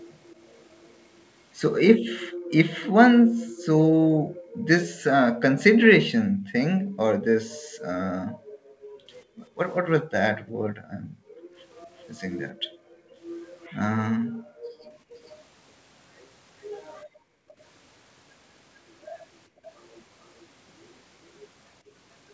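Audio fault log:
0.24–0.89 s, 11.76–13.65 s, 17.48–17.54 s: echo leak. A faint, separate copy of the speech arrives about 355, 392 and 447 ms behind the original, roughly 30 dB down (about 35 dB in the last, very brief instance). It is likely sound from a loudspeaker on the far side that the echo canceller failed to remove. Unlike room reverberation, which smears into a tail, this is a distinct delayed repeat a few hundred milliseconds later.
2.24–4.67 s, 6.23–15.0 s, 17.05–17.48 s, 19.49–19.64 s: background gated by the echo canceller. The room sound sinks by as much as about 40 dB (about 23 dB in the short dip near 19.5 s) while loudspeaker playback is active, then comes back once the canceller releases. The dips add up to around a second and a half, then about five seconds, then under half a second. Unlike packet loss, which breaks up everything, only the background ambience drops out.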